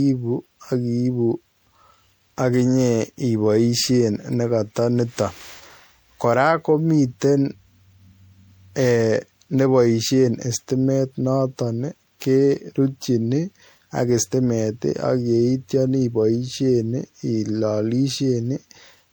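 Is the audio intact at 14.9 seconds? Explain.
No. At 14.9 seconds, as across the whole clip, the speech has generation loss, likely from MP3 encoding repeated about seven times. The result is swirly, hollow and smeared, with blurred attacks, more degraded than a single 96 kbit/s pass would sound. A spectrogram shows patchy holes and ragged high bands.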